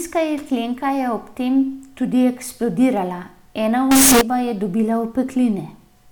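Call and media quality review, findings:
Float read as integer, 3.91–4.21 s, ending just before "je dobila". Burst of very loud, harsh, near-square distortion at an almost fixed, high level; background noise as loud as speech; pitch still traceable. Likely decode-path fault: 32-bit float samples interpreted as 32-bit integers, so sign and exponent bits drive the level regardless of original loudness. Check sample-format negotiation at that stage.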